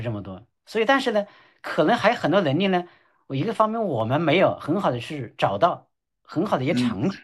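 At 4.00 s the speech carries a single sharp click. The likely cause is dropped samples: only a handful of samples, well under a tenth of a millisecond, seem to be missing, so the waveform steps straight from one value to a later one. That jump shows as a thin vertical line across the spectrum. Unlike a dropout or lost packet, no audible stretch of sound goes missing, and nothing comes across as muted or stuttering, only the click.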